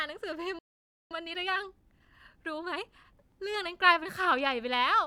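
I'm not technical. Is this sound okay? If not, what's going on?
No. At 0.59 s the speech cuts out mid-flow and stays silent for about half a second, picking up again at 1.11 s. This is a playback stall. The likely cause is that the player briefly ran out of audio to play, or was held up by something else on the device, so nothing came out until it caught up with the data again.

From 1.11 s to 3.17 s the speech sounds rushed, running about 1.25 times faster than normal, yet the voice doesn't go higher or squeakier. This is time-compressed catch-up. Having fallen behind during the silence, the player trims out tiny slivers of sound and blends the edges together, so it can get back on schedule without changing the pitch.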